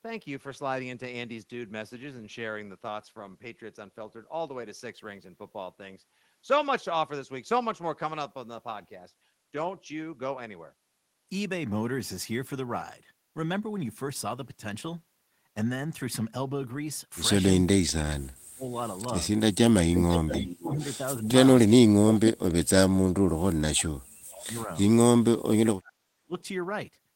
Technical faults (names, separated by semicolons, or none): speech suppressed in double talk; echo leak